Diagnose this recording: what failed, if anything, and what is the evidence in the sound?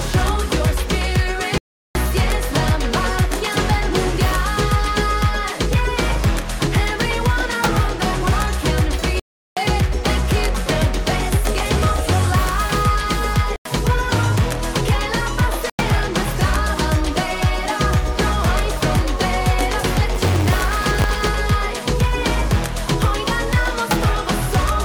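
Blocks of digital silence at the driver buffer. Dropouts occur at 1.58, 9.20, 13.56 and 15.70 s, lasting 0.37 or 0.09 s. This fits 16384- and 4096-sample blocks.

Buffer tearing from 20.14 to 21.27 s. A 100 Hz buzz rides on the signal. Each period carries a small slice of stale audio, about 20 ms old.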